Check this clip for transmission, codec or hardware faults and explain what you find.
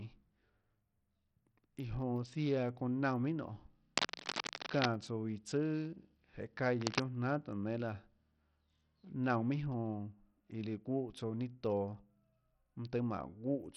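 Two faults are audible in the speech: a coarse, band-limited codec sound throughout and two short scratching bursts.

Bluetooth SBC compression: across the whole clip the treble is thin and unsteady, with grit riding on the speech and nothing above 14.4 kHz. The likely cause is heavy SBC coding at a low bitrate, roughly 64 kbps, starving the upper sub-bands of bits.

Cable scratch noise: from 3.97 to 4.86 s a dense, ragged rustle sits a little below the speech level, and from 6.78 to 7.04 s a shorter burst comes in about as loud as the speech. This is likely a worn cable or connector shifting and its contact resistance fluctuating.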